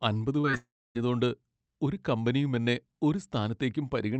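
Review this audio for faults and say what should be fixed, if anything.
Two short concealed packet losses come early in this speech, at 0.41 to 0.45 s and 0.51 to 0.55 s. In each, about 20 ms of audio never arrived, and the decoder extended the preceding sound before crossfading back, leaving a brief smear or wobble. Unlike a dropout, the sound never goes silent and resumes almost at once. More jitter-buffer depth or in-band forward error correction would prevent these.

A long network dropout follows from 0.57 to 0.97 s, likely caused by a network dropout. The concealed sound continues as a buzz or hiss and fades within about a tenth of a second, then roughly 0.28 s of silence follows before the speech returns with about 0.4 s missing. The gap of actual silence and the lost stretch separate this from the short smears just before it. Redundant transmission or a more stable network route would prevent it.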